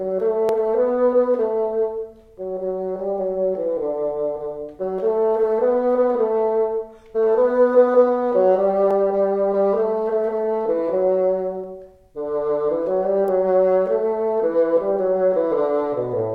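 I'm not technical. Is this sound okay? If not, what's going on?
No. There are two kinds of problems.

At 0.49, 8.91 and 11.64 seconds, the sound jumps forward a little. This is most likely a dropped buffer (overrun). The recording software fell behind for a moment. A tiny slice of sound was lost, roughly a fiftieth of a second at 0.49 and 11.64, and about half that at 8.91. There is no gap. The sound on either side is simply joined together.

At 13.28 seconds, there is a sharp snap on top of the sound. This is likely an electrical switching spike. A nearby switch, motor or static spark sent a brief burst of electricity into the audio line. It lasts only a couple of thousandths of a second. It is heard as a crisp crack.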